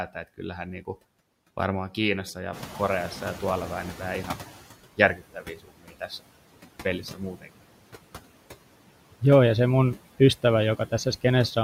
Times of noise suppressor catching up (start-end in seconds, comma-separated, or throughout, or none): 2.52-4.59